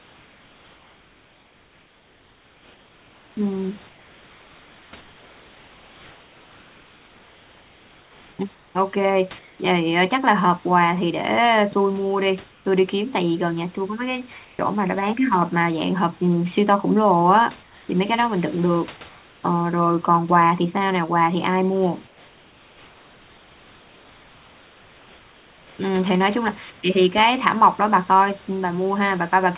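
Comfort noise in place of the background appears in eight pauses: 0.0–3.37 s, 3.89–8.75 s, 9.39–9.59 s, 12.51–12.65 s, 14.45–14.59 s, 17.63–17.89 s, 19.09–19.43 s and 22.07–25.79 s. The real room noise drops out. A smooth, featureless hiss takes its place, up to about 4 dB quieter. The sender likely stopped transmitting during silence, leaving the receiver to synthesise filler. The speech itself has nothing above 4 kHz, which fits a narrowband call codec.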